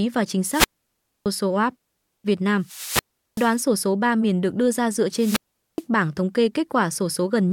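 Speech cut by three wireless microphone squelch dropouts, at 0.48–1.26 s, 2.59–3.62 s and 5.14–5.84 s: the fading radio link brings up hiss, the receiver mutes for about 0.62, 0.38 and 0.42 s, then the voice returns. Waveforms show flat gaps; spectrograms show broadband noise bordering blank columns.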